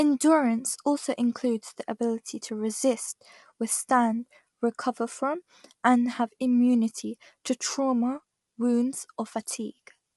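Throughout, the speech sounds rough and grainy, with noise filling the gaps between harmonics and nothing above 11.6 kHz. This is likely low-delay AAC compression, AAC-ELD, whose short frames resolve pitch poorly at a bitrate around 32 kbps.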